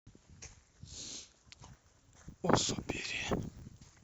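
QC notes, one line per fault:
1.68–4.04 s: filter restarted on every block. A 100 Hz buzz sits under the speech and tracks its level. The filter drops its state at each block boundary, so every block starts with a small transient, pointing to 10 ms blocks.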